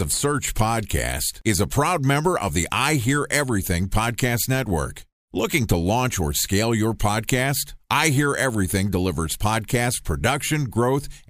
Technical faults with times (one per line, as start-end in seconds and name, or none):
none